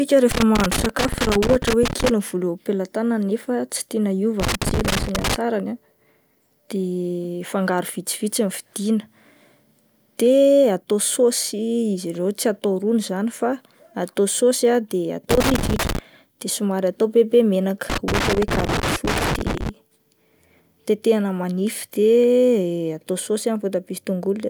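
Irregular bursts of crackle and scratching break up the speech from 0.31 to 2.09 s, 4.40 to 5.36 s, 15.31 to 15.99 s just before "de somary atao be", and 17.90 to 19.69 s after "atao be be menaka". This is loose connector crackle, where a worn contact rapidly makes and breaks, chopping the signal.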